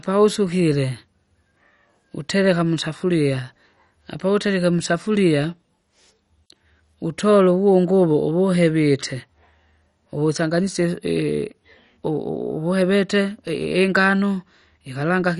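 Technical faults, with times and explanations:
Throughout: MP2 compression, likely, and pretty heavy going. The speech is dull, with nothing above about 11.3 kHz, and there's a gurgling, grainy texture riding on it the whole way. Layer II splits the audio into 32 sub-bands and hands out bits to each. When bits are short, the top bands get switched off entirely, and what's left is quantised coarsely. The damage is plainly audible, which points to a low rate, somewhere near 48 kbps.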